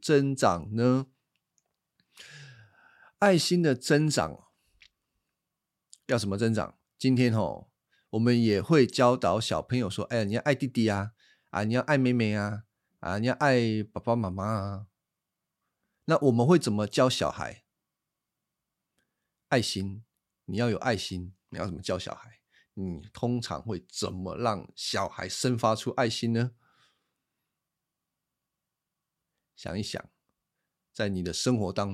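A speech recording with no technical faults to report. Nothing in it needs a time stamp or a cause.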